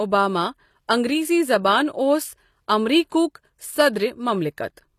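Throughout the speech, the treble sounds gritty and metallic, with nothing above 14.9 kHz, pointing to low-bitrate HE-AAC compression (likely about 24 kbps) rebuilding the highs by band replication. From 3.09 to 3.12 s, a short hiss of about 34 ms creeps in before an attack and softens it. This is pre-echo, where quantisation noise spreads across the whole transform block.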